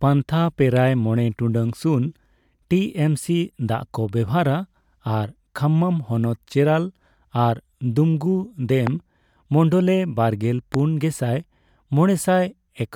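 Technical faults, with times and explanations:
8.87–8.89 s and 10.74–10.76 s (the second just after "ᱢᱚᱱᱰᱚᱞᱮ ᱵᱟᱨᱜᱮᱞ"), loud pop: a single sharp click about 15 dB above the speech, most likely a voltage pulse from a plug, switch or static, with the speech continuing underneath; the waveform shows a tall isolated spike, and the spectrogram a thin full-height vertical line.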